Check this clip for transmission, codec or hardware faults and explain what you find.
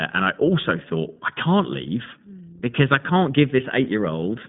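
One fault runs through the whole clip, iLBC codec coding. Across the entire clip, the speech has passed through an iLBC codec, which codes each 20 ms frame's excitation independently of the previous frame. Its roughness and slightly synthetic texture fit the roughly 15.2 kbps mode. The audio sits in a telephone band of about 150 Hz to 3.7 kHz with nothing above 3.8 kHz, so it sounds muffled and thin, and the codec damage is plainly audible.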